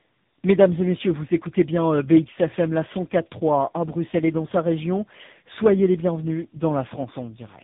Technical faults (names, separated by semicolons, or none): tandem speech coding